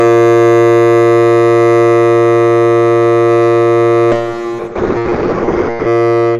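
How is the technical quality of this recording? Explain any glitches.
One glitch stands out in this music clip, near the end. From 4.12 to 5.93 s, a call bitrate drop starves the encoder, which fits a fall from 64 to 7 kbps. The band narrows to 8 kHz, so the music turns muffled and watery.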